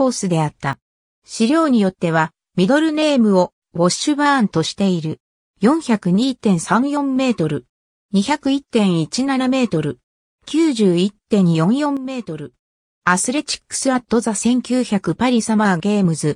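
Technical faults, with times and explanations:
0.73–1.22 s and 11.97–12.54 s, sudden gain jump: The level drops abruptly by about 12 dB, then about 9 dB, and recovers just as abruptly. Sound and background noise fall together. The likely cause is a digital gain change applied without a ramp.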